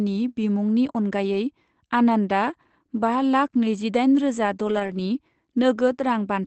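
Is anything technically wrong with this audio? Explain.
Yes. Between 4.67 and 5.01 s the speech has a lost packet rebuilt from error correction. Lost packets were replaced by the lower-bitrate copies carried in the following packets, about 180 ms in total, which fits roughly nine packets. There's no gap, but those frames sound rougher and grainier. A spectrogram shows smeared, noisier harmonics there, while the waveform stays continuous with no dropout. The Opus call path's roughly 8 kHz bandwidth limit is audible throughout.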